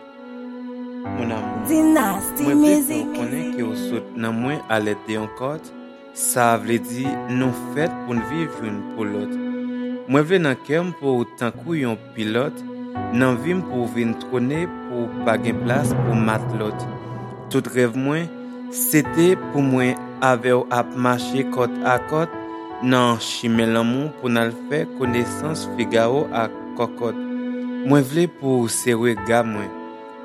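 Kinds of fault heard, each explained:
No technical faults can be heard anywhere in the recording: the signal stays continuous and steady throughout, with no dropouts, distortion, interference or timing disturbances.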